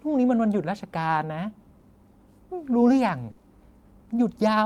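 Speech with two kinds of network dropout. A short concealed packet loss at 1.79 to 1.83 s, and again at 3.39 to 3.43 s, replaces about 20 ms with audio extrapolated from the preceding sound, giving a brief smear or wobble. On a spectrogram each appears as a thin band where the sound flattens or blurs before the real texture returns. A burst of packet loss from 3.31 to 3.39 s loses 60 ms, filled by a fading continuation of the last sound, heard as a held buzz or hiss. The waveform shows a decaying stretch, and the spectrogram shows smeared, sustained sound that loses energy before the real audio resumes.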